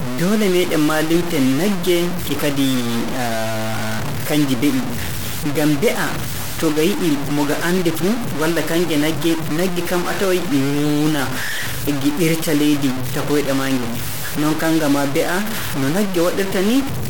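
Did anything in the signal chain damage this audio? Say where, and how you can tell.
Yes. Low bit depth without dither throughout: grainy, signal-following distortion roughly 10 dB below the speech, quiet passages sputtering to silence, fitting a likely sample-format conversion truncated to 3 bits.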